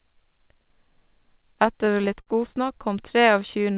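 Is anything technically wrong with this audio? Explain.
Yes, there are two playback glitches, both from the receiver's jitter buffer. The narrowband sound, with nothing above 4 kHz, fits a G.711 A-law call path at 64 kbps.

From 1.42 to 2.29 s there are repeated stalls (stutter). Packets kept showing up late, so the buffer ran dry eight times in that stretch, and each time the receiver stretched out the last sound to cover the hole. That's about 129 ms of filler, roughly 15% of the span, with the longest gap 58 ms. Nothing is actually lost, but the audio catches and drags in little hiccups.

From 3.39 to 3.75 s there's a jitter buffer slow-down. The buffer was trying to rebuild its reserve, so it repeated single pitch periods over and over, adding about 40 ms. Playback drops to about 91% speed while the pitch stays put, so sounds come out slightly drawn out, with maybe a faint warble, right up to near the end.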